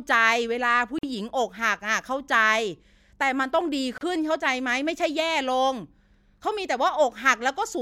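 At 0.99 s and again at 3.98 s the speech breaks off for about 48 ms and then 31 ms: a gap at a join of encoded pieces. Separately encoded segments were butted together with their start-up delay and final-frame padding left in, so true silence opens mid-sound. The speech resumes exactly where it paused, with nothing skipped and no repeated or smoothed-over material, which separates it from a dropout or concealed packet loss. The edges are smeared.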